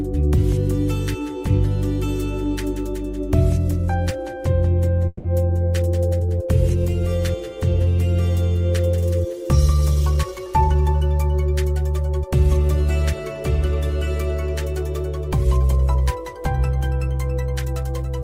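The audio has two timing faults. From 5.07 to 5.27 s there is a call audio freeze: the sound stalls and the last moment carries on as a fading buzz for about 170 ms before resuming exactly where it stopped. Nothing is lost, but the gap adds 170 ms of delay, most likely because delayed packets left the jitter buffer empty. From 10.10 to 11.02 s a jitter buffer speed-up follows: playback runs at about 118% with unchanged pitch and sounds hurried. The receiver is trimming short pitch-period slices back to back, around 150 ms in total, to work off the extra buffered delay.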